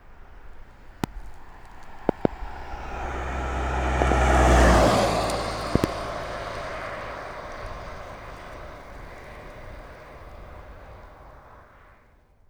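A sudden voltage step, likely from a plug, switch, static discharge or driver glitch, is being added to the signal, and the following circuits shape it into a loud pop. A single sharp pop lands at 1.04–1.06 s, then double pops at 2.09–2.27 s, 4.02–4.14 s and 5.76–5.86 s. Each peaks about 20 dB above the sound (about 25 dB at 2.09 s), while the sound carries on underneath.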